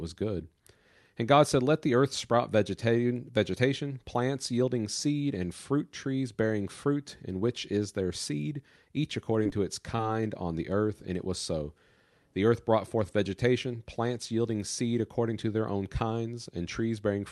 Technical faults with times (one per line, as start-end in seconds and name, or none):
9.43-9.47 short concealed packet loss
9.96-10.14 short concealed packet loss